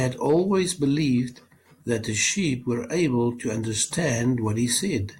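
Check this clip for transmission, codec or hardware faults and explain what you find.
Hard clipping occurs in three stretches of the speech, at 0.00 to 0.84 s, 1.92 to 2.28 s and 3.82 to 4.11 s. About 2 dB of overdrive exceeds a stage's limit, so peaks are cut flat, adding high harmonics heard as crackle on peaks.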